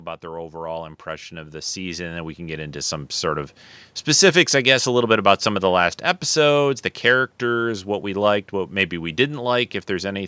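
From 0.21 to 3.58 s the speech and its background swell together, climbing by about 14 dB over more than three seconds. This is automatic gain rising: the gain control judged the input too quiet and kept turning it up gradually, lifting the background along with the talker.

Between 4.08 and 7.35 s the level sinks again, more gently, by about 3 dB, with the background fading in step. That is automatic gain falling, where the controller decided the input was too loud, or its background noise too strong, and eased its gain back down. The call's microphone processing, which leaves nothing above 8 kHz, shapes both passages.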